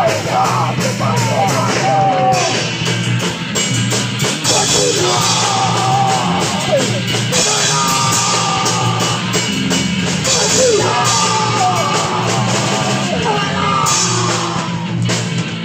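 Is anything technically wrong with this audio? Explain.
No, nothing is technically wrong with this audio.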